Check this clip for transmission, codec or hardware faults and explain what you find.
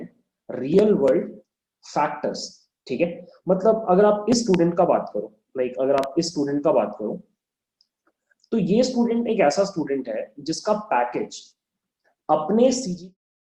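Two loud pops turn up in the clip, a hardware-type fault rather than anything from transmission or a codec. The likely cause is a sudden voltage step or pulse, from a connector, a switch, static discharge or a driver glitch, entering the signal path, where the following circuitry shapes it into a brief thump. The first is a single pop at 4.54 to 4.56 s; the second, at 5.98 to 6.06 s, is a double pop. Each peaks at about 15 dB above the surrounding sound, which carries on beneath them. The fade-out ending near 13.2 s is smooth and clean.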